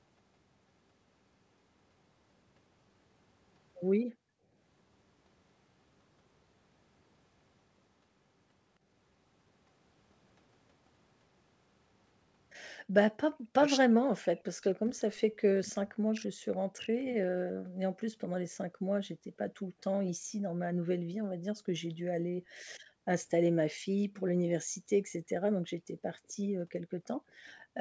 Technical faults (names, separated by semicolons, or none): background gated by the echo canceller; speech suppressed in double talk; echo leak